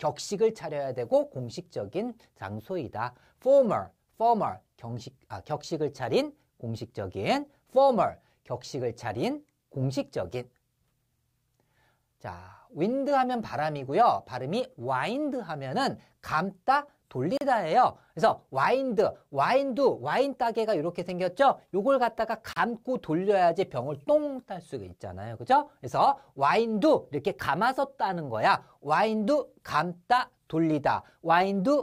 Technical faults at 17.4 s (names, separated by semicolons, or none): Bluetooth stall